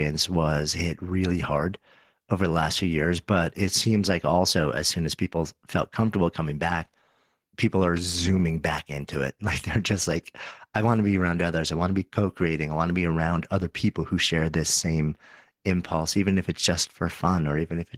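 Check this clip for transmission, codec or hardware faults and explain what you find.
Nothing in this speech recording points to any transmission, codec or hardware trouble, so there's nothing to flag here.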